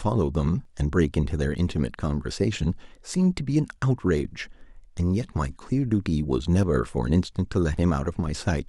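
At 0.65 s and again at 6.63 s, the speech has a tiny skip. This is overlap between stream segments. Two segments claimed the same roughly 12 ms. The player cut that stretch, so the waveform jumps. The skips recur six seconds apart.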